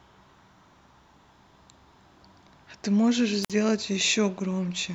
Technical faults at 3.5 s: wireless microphone squelch dropout

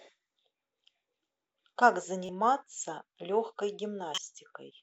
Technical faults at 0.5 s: none

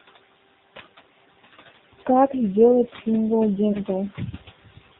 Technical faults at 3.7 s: noise suppressor artifacts; AMR narrowband mobile codec; lost AMR speech frames

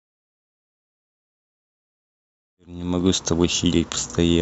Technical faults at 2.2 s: none

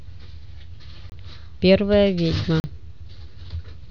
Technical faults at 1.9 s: none

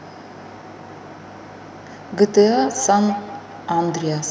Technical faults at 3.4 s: feedback echo between two devices

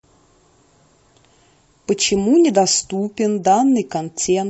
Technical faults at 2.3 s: low-delay AAC compression

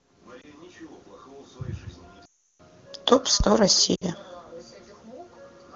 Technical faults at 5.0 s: none

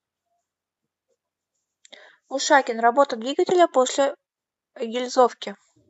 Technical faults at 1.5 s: none

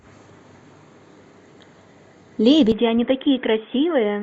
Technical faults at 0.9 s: none

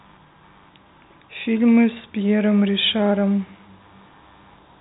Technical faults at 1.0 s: computer activity noise

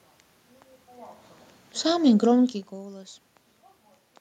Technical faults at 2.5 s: automatic gain falling

